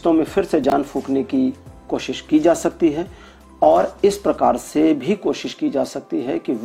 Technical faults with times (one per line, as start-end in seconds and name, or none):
0.64-0.72 chunks out of order